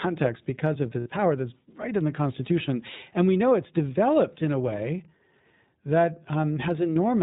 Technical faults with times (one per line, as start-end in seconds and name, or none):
0.00-7.22 iLBC codec
1.00-1.08 lost iLBC frames